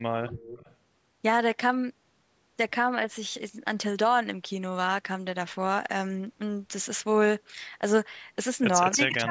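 Right at the start, from 0.27 to 0.75 s, there's a faint delayed double of the speech trailing the original by about 277 ms and sitting roughly 20 dB under it. That's an echo leak: the far end is most likely on a loudspeaker, and its echo canceller didn't scrub out everything its mic picked up, so a copy comes back to you. It's short, about half a second.

Then at the very end, from 8.94 s to the close of the clip, the speech sags by as much as around 20 dB in patches totalling something like a third of a second. That's speech suppressed in double talk. Both sides were talking at once, and the echo canceller, likely unable to tell the local talker apart from loudspeaker echo, ducked everything, leaving the speech turned down.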